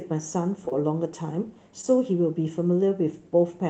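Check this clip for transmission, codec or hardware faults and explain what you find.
Short concealed packet loss occurs three times in this speech. The whole clip passes through a call codec whose content stops near 8 kHz.

From 0.65 to 0.73 s, two losses fall back to back, and a third comes at 1.81 to 1.85 s. Each time about 20 ms of audio arrived too late. The receiver filled the gap by continuing the preceding sound, then crossfaded back into the real signal. This is heard as a brief smear or wobble. On a spectrogram the filled stretch shows as a smooth, blurred patch.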